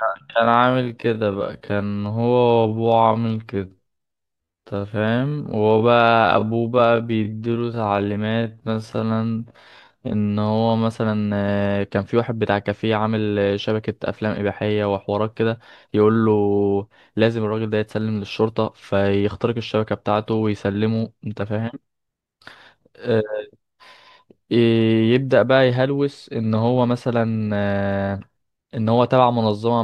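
From the start to 10.86 s the speech runs at about 0.55 times its natural pace with unchanged pitch, a time-stretched section likely caused by software repeating short pieces to fill length. It sounds dragging; a spectrogram shows stretched syllables at normal harmonic spacing.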